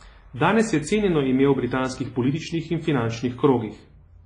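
Throughout the speech, heavy WMA compression damage is likely: ringing, washy smearing and breathing hiss, fitting roughly 24 kbps, with a spectrogram showing nothing above 10.5 kHz.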